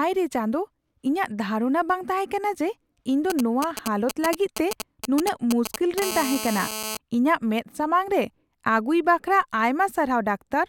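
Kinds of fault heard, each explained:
GSM signalling bursts: From 3.30 to 6.00 s, just after "ᱛᱟᱦᱮᱠᱟᱱᱟ ᱡᱮ ᱤᱧ ᱫᱚ", a galloping dit-dit-dit of short buzzes cuts across the speech, loud enough to sit only a little under it. A nearby 2G phone is sending brief clusters of radio bursts, as it does while signalling, and the audio circuit rectifies each burst into sound, so every cluster arrives as a clipped 217 Hz rasp rather than a steady tone.
GSM phone buzz: From 6.02 to 6.97 s the stuttering gives way to a continuous hard, raspy buzz at 217 Hz, rich in harmonics and unrelated to the speech, at about 7 dB below it. Here the phone has moved into a call and transmits its bursts 217 times a second without pause. The audio circuitry demodulates that regular pulse train, producing a steady buzz instead of the earlier intermittent groups.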